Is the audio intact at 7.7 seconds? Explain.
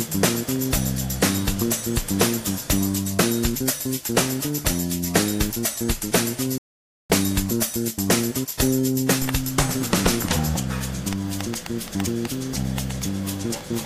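Yes, at 7.7 seconds the audio plays through intact, with no dropout, click, distortion or other fault audible at that moment.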